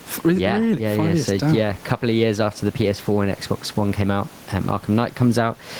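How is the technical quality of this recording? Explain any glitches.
The recording is compromised by gain pumping that runs through the whole clip. The gain recovers in the pauses and then sinks under each loud syllable, swinging by around 10 dB. The likely cause is input gain set much too high with a fast limiter or compressor clamping down on each peak, so loud and quiet passages are squeezed together and the speech sounds flattened. The room noise sits about 33 dB below the speech. On a waveform the speech peaks look evened out in level.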